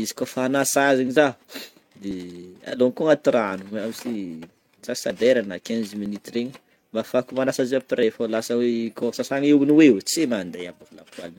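Speech, with five little skips from an overlap between stream segments. The timestamps of neighbouring one-second segments overlap, so the player trims the doubled span and throws away audio that was only there once, and the waveform jumps. You get skips at 1.16, 2.11–2.13, 6.06–6.08 right after "na quinze", 8.03–8.05 after "manasa azy", and a longer 9.03–9.07 dropout, roughly lining up with one-second segment boundaries.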